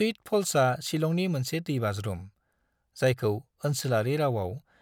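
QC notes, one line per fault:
No technical faults were found in the speech signal.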